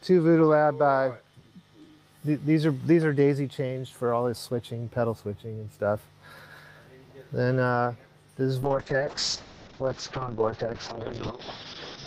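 A call bitrate drop hits at 8.63 s and lasts through the end of the clip, about 3.4 s. The call's bandwidth estimate collapsed and the encoder was pushed to a far lower rate, which fits a fall from around 32 kbps to about 6 kbps. Coding becomes coarse, and the audio bandwidth narrows from 20 kHz to 6 kHz, so the sound turns muffled and rough, with a watery texture that never recovers before the clip ends.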